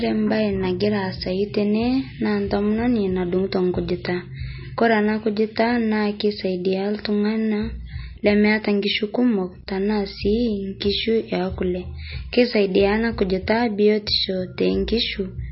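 Throughout the speech, the sound is dull and watery, with a swirling, metallic quality on s sounds and smeared consonant attacks, and nothing at all above 5.6 kHz. This is heavy MP3 compression, likely at a low bitrate around 25 kbps. Short of bits, the encoder cuts the treble at a fixed point and drops weaker frequency lines, which flicker in and out from frame to frame, producing the swirl and chirps.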